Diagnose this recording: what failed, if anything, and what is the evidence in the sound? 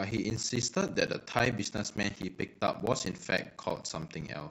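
Periodic USB or driver dropouts at the driver or buffer stage: from 0.11 s to 4.41 s the speech is broken by silent gaps of about 10 ms every 0.064 s, heard as a steady ticking. That rigid spacing rules out the irregular gaps of network packet loss.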